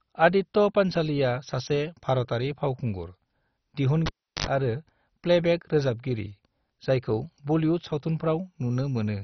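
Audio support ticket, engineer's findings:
MP2 compression, whole clip: likely MPEG Layer II encoding starved of bits, consistent with a rate around 32 kbps. Encoder shuts off upper sub-bands entirely and coarsely quantises the rest. Result: speech dull, nothing above 6.1 kHz, heavy gurgling, granular distortion, bands flickering in and out.

Cable pulled and plugged in, 4.06 to 4.47 s: live connector pulled and reinserted. Pop at disconnect, about 355 ms of near silence, then a 72 ms burst of 50 Hz mains buzz while only the tip makes contact, second pop as signal returns.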